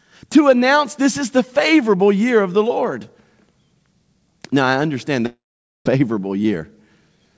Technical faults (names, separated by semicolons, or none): long network dropout